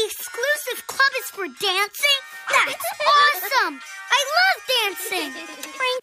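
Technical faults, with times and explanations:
No technical faults can be heard anywhere in the recording.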